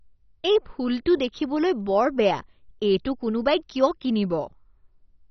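The speech runs throughout through what is likely heavy MP2 compression, starved of bits so that upper sub-bands switch off and nothing survives above 6.1 kHz; the remaining bands are coarsely quantised, leaving dull, gurgling, granular speech that fits a rate around 32 kbps.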